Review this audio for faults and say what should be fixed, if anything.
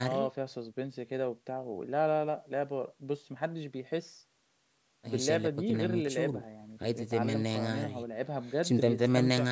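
A loud pop at 6.07–6.09 s, a single sharp thump peaking about 5 dB above the speech, likely from a voltage pulse such as static, switching or a driver glitch. To prevent it, secure connectors, avoid switching or plugging equipment mid-recording, and ground the setup properly.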